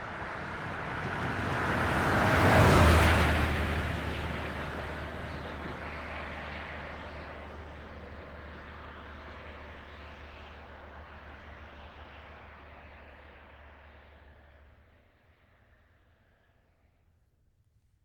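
Nothing stood out on listening to these sounds.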